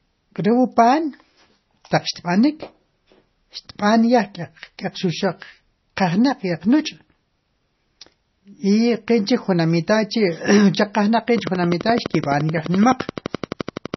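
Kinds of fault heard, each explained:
MP3 compression: heavy codec damage throughout, with nothing above 5.9 kHz and a watery, swirling quality, likely from a low bitrate around 24 kbps.
Train of clicks: regular ticking at 11.7 per second from 11.38 to 13.95 s, about 30 pulses peaking about 10 dB above the speech, likely from interference.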